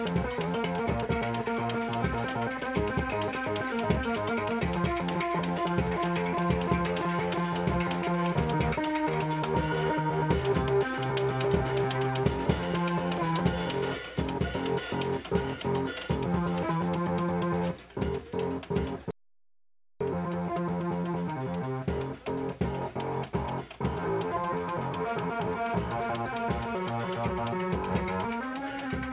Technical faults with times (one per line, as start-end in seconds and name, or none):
19.11-20.01 audio dropout to silence